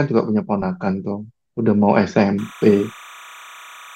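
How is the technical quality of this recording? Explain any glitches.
The recording has one glitch in its second half.

Timecode bleed runs from 2.38 s to the end of the speech clip. A linear timecode signal from an adjacent track or cable has leaked into the audio path. That code is a square wave that flips between two frequencies, here around 1 kHz and 2 kHz, and its rhythm fits 29.97 fps timecode. It sits roughly 20 dB below the speech as a steady, chirping warble that continues behind the voice.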